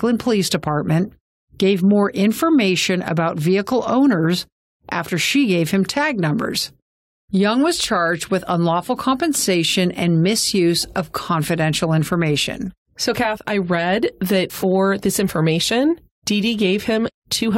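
At 14.62 s, between "I read that" and "this information", compressed frames are skipped: the decoder never plays a short run of encoded frames, so the speech jumps ahead by about 20 ms.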